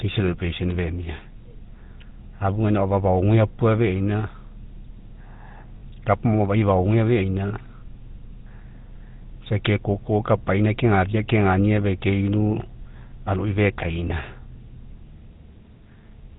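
Speech passed through the GSM full-rate codec, whose quality fits 13 kbps coding. The codec rebuilds the voice from a vocal-tract model driven by sparse, regularly spaced pulses and passes nothing above 4 kHz, so the whole clip sounds plainly buzzy, gravelly and muffled. It also has lost GSM frames at 5.78–5.83 s, 7.48–7.53 s, 10.38–10.40 s and 14.08–14.11 s. At each gap the decoder repeats the last good frame, so the sound briefly holds as a rough, metallic ring. The first gap fits two dropped frames and the others one each.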